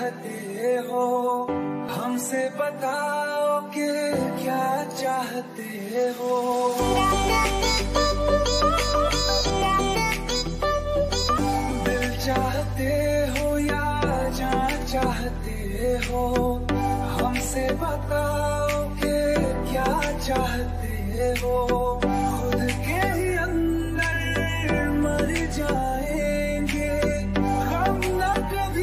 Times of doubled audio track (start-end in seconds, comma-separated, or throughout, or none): 6.52-9.50